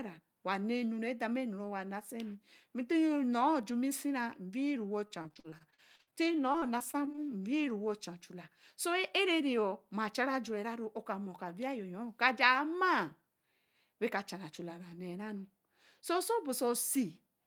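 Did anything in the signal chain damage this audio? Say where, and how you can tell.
Yes. Network stage: repeated packet loss (robotic sound) from 5.05 to 7.27 s, 22 gaps up to 59 ms, concealed by repeating sound; the spectrogram shows smeared, stuttering blocks.

Jitter buffer speed-up from 11.26 to 11.92 s: the receiver dropped about 50 ms of pitch periods, running speech 7% faster; the waveform shows shortened, spliced cycles.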